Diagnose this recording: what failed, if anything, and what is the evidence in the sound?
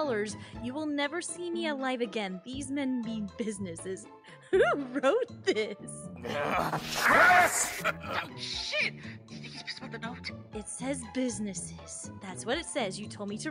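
Nothing in the signal chain has failed: level, continuity and timing hold steady across the whole recording, with no break, distortion or dropout anywhere in the sound.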